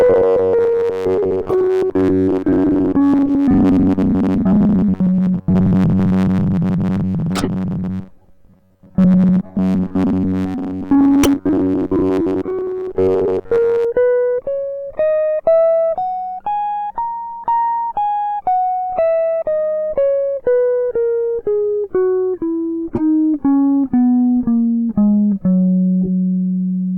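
A music clip with two faults. From 0.01 to 13.8 s it has a robotic sound from repeated short buffers. A rigid, metallic buzz at 93.8 Hz sits over the music. That fits roughly 10.7 ms slices being looped. Most of the real audio is skipped, likely because new audio arrived too seldom. Corrupt frames are also decoded, heard as short chirps and noise bursts. They occur at 1.49 to 1.54 s, 3.26 to 3.31 s, 7.33 to 7.49 s, 9.49 to 9.55 s, 11.23 to 11.27 s, 22.90 to 23.01 s and 26.03 to 26.09 s. Damaged data put energy at wrong frequencies. Most bursts are loud. The one at 9.49 s is faint.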